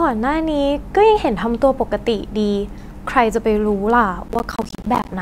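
From 4.28 s to 5.09 s the speech breaks into processor overload crackle: the system falls behind and misses many of its short deadlines in a row, each miss leaving a hard-edged silent gap roughly 10 ms long. Around thirty such gaps over those 0.8 seconds give a gritty tearing that sits on top of the speech and stops once the load eases. Unlike a single dropout, it is a dense cluster of tiny gaps rather than one clean hole.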